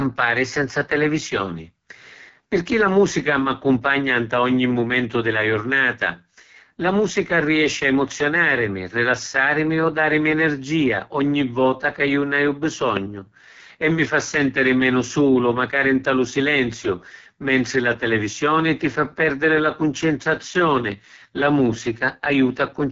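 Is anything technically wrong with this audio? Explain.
Yes. Throughout, the speech carries AMR wideband (HD Voice) codec damage: rough, raspy buzz from a coarse pulse-model at the lowest rates, which fits roughly 6.6 kbit/s, and nothing above 7.4 kHz. Unlike a plain low-pass filter, the texture itself is degraded, not just dulled.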